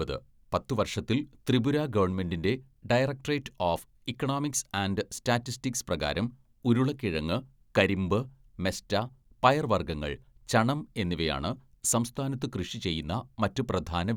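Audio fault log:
Nothing to log here, as the speech comes across without any technical faults worth noting.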